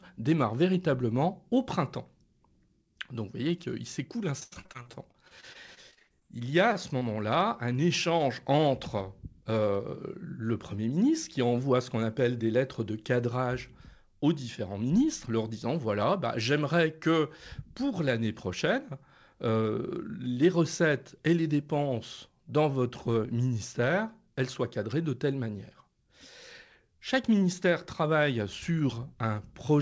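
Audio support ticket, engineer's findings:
Repeated packet loss (robotic sound), 4.40 to 7.03 s. Choppy speech with pieces missing. The network path dropped or delayed packets, leaving 22 gaps in close succession. The receiver filled each hole by extending the last sound. The longest gap was 83 ms, and about 19% of the stretch is concealed.

Jitter buffer speed-up at 8.58 to 9.60 s and 24.23 to 24.79 s. Speech runs faster at unchanged pitch, about 4% and 5% fast. The receiver's buffer had overfilled, so it cut pitch-period slices to reduce delay. Roughly 50 ms and 40 ms were removed.

Band limit on the call codec path: nothing above 8 kHz, which fits G.722 at 64 kbps.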